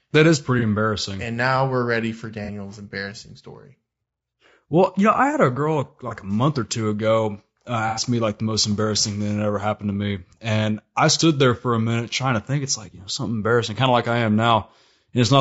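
Throughout, the speech sounds rough and grainy, likely from low-delay AAC compression (AAC-ELD) at a bitrate near 32 kbps; a spectrogram shows noise filling between harmonics and a thin top band.

AAC frame loss with concealment appears as brief smeared, noisy patches where the decoder rebuilt missing frames: 0.59–0.63 s; 2.45–2.50 s, after "now we're ready for"; 6.08–6.13 s, before "a month or two"; and 7.88–8.02 s, after "or two ago uh". On a spectrogram these show as blurred smudges.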